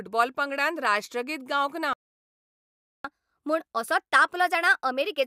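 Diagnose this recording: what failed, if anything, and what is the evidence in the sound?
The playback stage stalled, most likely because the player's buffer ran dry or its thread was held up, so nothing reached the output. The speech stops abruptly at 1.93 s, right after "पंगडान राष्ट्रगीत गावंक ना", and the line stays silent for 1.11 s until output resumes at 3.05 s. The break lands mid-flow rather than at a natural pause, and speech then picks up again after the gap.

Once output resumed, the player entered catch-up at higher speed, resampling its backlog to win back the lost time. From 3.05 s to the end of the clip the speech runs at 1.15 times normal speed. Because resampling shifts speed and pitch together, the voice also sits around two semitones higher, giving a hurried, slightly chipmunk quality that persists until the recording ends.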